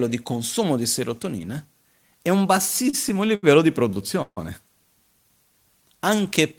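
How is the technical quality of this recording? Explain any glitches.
The speech drags and stutters in two stretches, with repeated stalls. From 2.83 to 3.45 s, just after "di serotonina e un", six brief holds stretch the sound; from 3.89 to 4.39 s, four more follow, one lasting 148 ms and fading. Packets arrived late, so the jitter buffer emptied and the last sound was held until playback resumed, with nothing lost.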